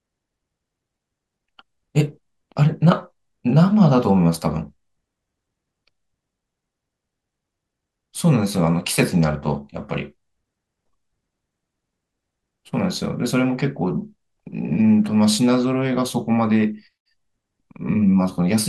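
No technical faults are audible.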